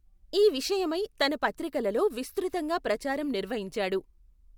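From start to finish the speech carries a resampler restarted on every block, which fits a 44.1 to 48 kHz conversion done in 10 ms chunks with no memory between them. Each chunk edge is filtered against missing neighbours, leaving a small error every 10 ms. These tick at 100 per second, fusing into a buzz that appears only while speech is present. A spectrogram shows evenly spaced vertical streaks, with harmonics at multiples of 100 Hz; the waveform shows tiny steps at each edge.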